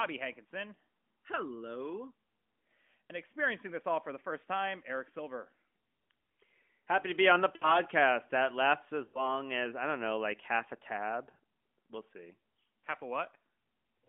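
Lost AMR speech frames: a quick warble at 3.06 s, then 7.56 to 7.79 s and 9.08 to 9.30 s, where the decoder stretches the last good sound and fades it, like about three dropped frames.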